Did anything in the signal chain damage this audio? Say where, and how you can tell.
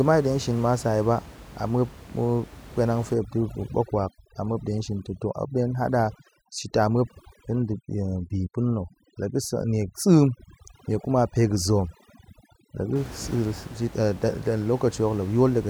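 Yes: overdone noise removal in call processing, 3.14 to 12.96 s. Bands near the noise estimate are gated off along with quiet parts of the voice, leaving twinkling near-silence over room noise about 18 dB down.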